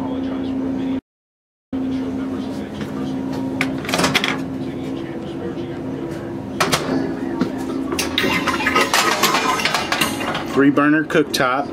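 At 0.99 s the player most likely ran dry of buffered data, or its playback thread was held up, and it produced nothing until it caught up at 1.73 s. This is a playback stall: the sound cuts off abruptly in mid-flow and a noticeable gap of about 0.74 s follows before the audio picks up again.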